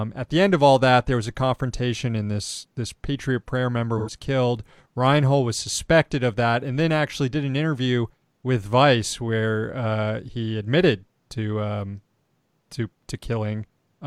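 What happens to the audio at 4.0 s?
At 3.98 s the speech breaks up briefly with AAC frame loss with concealment, lasting until 4.10 s. About 85 ms of coded audio never reached the decoder, which fits two lost frames. The decoder covered the gap by reusing the last good spectrum with randomised phase. The result is a short smeared, noisy, phasey patch. The gap is too brief to fade into silence.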